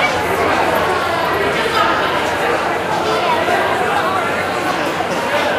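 No technical faults are audible.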